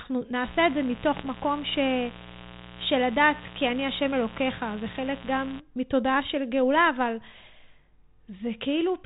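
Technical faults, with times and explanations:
0.43–5.60 s, mains buzz: a steady, raspy 60 Hz buzz sits roughly 15 dB under the speech and then stops. Switching spikes from something like a dimmer or an unshielded line get in twice per mains cycle, so harmonics climb well into the kHz range.
1.17–1.27 s, bit errors on an ADPCM link: a short rough burst with pops and a quick level wobble, about a tenth of a second long. It points to a few frames hit at an error rate around half a percent. Each flipped bit throws off the decoder's step size and prediction, so the damage smears on for several milliseconds instead of being a single click. This comes over what sounds like 32 kbit/s G.726 with only light coding grit.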